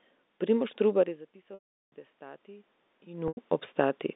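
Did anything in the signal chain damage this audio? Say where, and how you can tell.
Yes. In call processing, automatic gain rising starts at 0.95 s, after the level falls about 20 dB as the talker moves away. The gain climbs slowly, about 6 dB by 3.5 s. Voice and room noise swell together, which marks gain control.

At the network stage, packet loss with pitch repetition occurs twice. From 1.54 to 1.92 s, 380 ms is lost. A buzzy repeated pitch fades into silence, then speech cross-fades back. At 3.28 to 3.37 s, a 90 ms loss sounds like a briefly held note.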